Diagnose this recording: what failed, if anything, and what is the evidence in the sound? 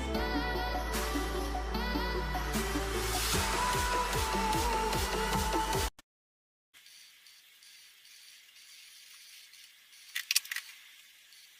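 The network stage likely suffered a long network dropout, with no packets arriving from 6.01 to 6.76 s. The receiver filled the gap, but the fill is almost entirely silence, and the sound resumes at 6.76 s with about 0.72 s of material missing.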